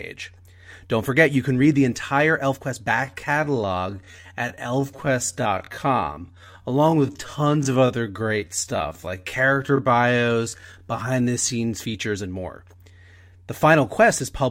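From about 2.9 s to 11.58 s the speech drops to roughly 0.64 of its normal pace, then snaps back just before "features and more". It sounds like a time-stretched section, likely from software padding the audio to a target length by repeating short pieces while holding pitch, so it drags without sounding any lower.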